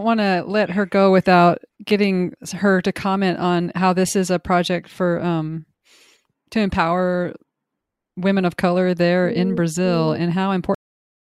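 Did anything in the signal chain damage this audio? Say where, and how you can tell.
Yes. A cut-off end, at the storage or buffer stage. At 10.75 s the speech stops mid-sound and falls straight to digital silence until the end. There is no decay. The final buffers were never written, so the recording just stops.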